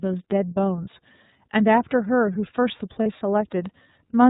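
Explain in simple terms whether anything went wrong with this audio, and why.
Two things went wrong. First, the speech passed through the iLBC codec, a compressor built for internet phone calls. It chops the audio into short chunks, here sounding like 30 ms pieces, and rebuilds each from a simplified model, throwing away everything above 4 kHz. That is why the speech sounds muffled and plainly rough, with a slightly synthetic edge instead of natural crispness, from start to finish.

Second, there are lost iLBC frames: one chunk of data, about 30 ms, never arrived, between 3.03 and 3.07 s. The decoder filled the hole by repeating the last bit of vocal vibration mixed with a little noise, so that moment comes out as a brief held, buzzy vowel. Because each iLBC chunk stands on its own, the speech snaps back to normal right after.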